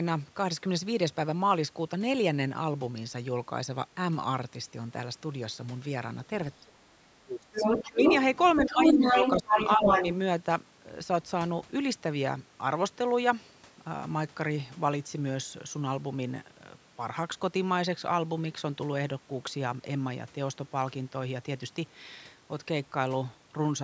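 From 6.61 to 6.97 s the speech drops sharply, by roughly 30 dB, and it dips again by about 20 dB from 7.17 to 7.57 s. This is speech suppressed in double talk: with both sides talking, the echo canceller likely mistook the near talker for loudspeaker echo and turned everything down.

At 7.54 s a second voice surfaces, the other side's voice leaking through, running to 8.18 s slightly louder than the talker. It returns faintly from 8.35 to 8.61 s, then strongly again from 8.79 to 10.15 s. Residual loudspeaker echo is likely getting past the canceller into the microphone.

While that leakage plays, the suppression continues in shallower dips: about 10 dB from 8.56 to 9.14 s, about 15 dB from 9.34 to 9.58 s, and a slight dip of about 5 dB from 9.77 to 10.04 s.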